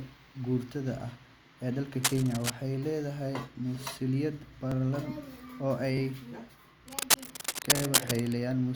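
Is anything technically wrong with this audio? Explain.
Yes, there are two kinds of fault in this speech.

Cable scratch noise: a worn cable, connector or control was likely disturbed, and its contact resistance fluctuated rapidly. From 2.03 to 2.51 s, between "maguurtada ah ee dalka" and "leedahay masuuliyad", and again from 6.88 to 8.37 s, dense, ragged scratching sits over the speech at about the same level as the speech itself.

Repeated buffer: new audio arrived late, so playback reused the previous block of about 21 ms, which fits a 1024-sample buffer. At 4.72 to 4.74 s, after "leedahay masuuliyad", and at 5.97 to 6.00 s, one block plays twice. At 7.77 to 7.81 s, one block plays three times. Each case sounds like a brief buzzy stutter with hard joins, and no speech is dropped.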